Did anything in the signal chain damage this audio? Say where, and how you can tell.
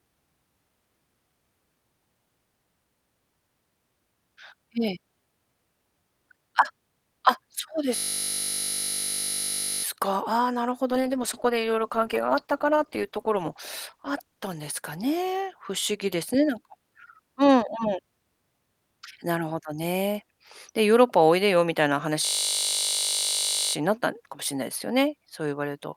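Yes, in three places. The first is a system hang loop at the driver or buffer stage, from 7.96 to 9.84 s and again from 22.26 to 23.74 s. Each time the sound collapses into a steady 50 Hz buzz, because one 20 ms slice repeats exactly while the machine is frozen and the hardware keeps cycling the same ring buffer. That slice length fits a buffer of about 20 ms. Little or no audio goes missing; the speech resumes where it stopped.

The second is a call bitrate drop in the codec and network path, from 10.93 to 15.89 s. The speech turns rough and muffled, with the top end thinning out, and it is worst for about 2.65 s before clearing. The sound points to the encoder being pushed from around 64 kbps down to roughly 13 kbps after the call's bandwidth estimate fell. At that rate Opus codes much more coarsely and trims the high frequencies until the bitrate recovers.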